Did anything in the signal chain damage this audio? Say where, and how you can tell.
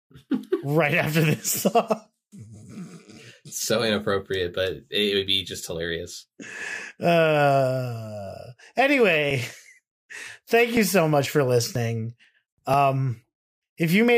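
Yes. At the USB or driver stage, something blocked the audio stream roughly every 0.49 s from 9.31 s to 13.72 s, causing periodic USB or driver dropouts. About ten times, around 10 ms of speech was skipped outright, leaving evenly spaced ticks as the signal jumps across each gap.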